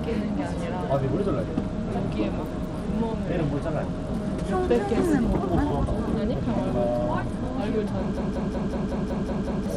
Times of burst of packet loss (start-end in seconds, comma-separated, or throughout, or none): none